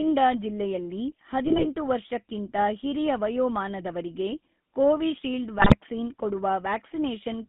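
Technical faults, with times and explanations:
Throughout: GSM full-rate codec. The speech has the buzzy, gravelly roughness of this early mobile coder, and the damage is plain to hear. It rebuilds each frame from a vocal-tract filter driven by a sparse, regularly spaced pulse excitation, which fits a 13 kbit/s full-rate stream. The line band runs from 150 Hz to 3.5 kHz. That steady, even grit across the whole clip is what separates it from the brief breakups below.
1.45–1.66 s and 5.58–5.76 s: GSM bit errors. In each burst the voice breaks into squawks and gargling. Corrupted filter, pitch and gain values reach the decoder, so for a few frames the spectrum is bent and the level jumps. The lengths point to about nine and eight damaged frames, at error rates near 2.5 and 3 percent. Unlike the constant codec roughness, these are short, erratic distortions that come and go.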